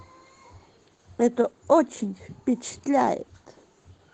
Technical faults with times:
0.00-4.14 Opus voice compression

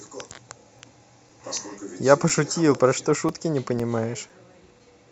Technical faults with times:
0.29-4.80 periodic USB or driver dropouts

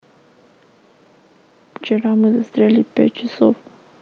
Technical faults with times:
1.64-3.04 automatic gain rising

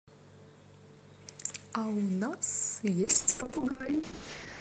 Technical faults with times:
3.04-4.61 call bitrate drop

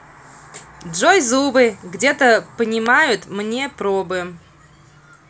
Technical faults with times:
2.86 electrical switching spike

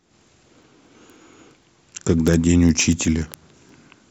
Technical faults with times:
0.15-4.10 word clock ticks

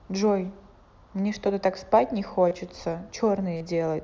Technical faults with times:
2.49-2.51 concealed Bluetooth headset packet loss
3.57-3.61 concealed Bluetooth headset packet loss

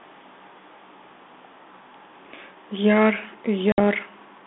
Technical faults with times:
3.72-3.81 packet loss on an ADPCM call

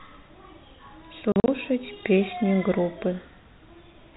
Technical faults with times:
1.32-1.48 packet loss filled with silence

